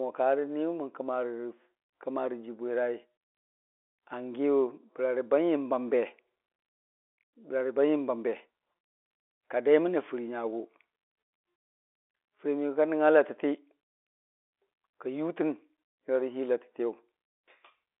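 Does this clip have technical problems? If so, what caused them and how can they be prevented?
No, nothing faulty is audible; this is G.711 telephone coding at its normal line band of roughly 300 Hz to 3.6 kHz, with nothing above 3.8 kHz, so there is no problem to prevent.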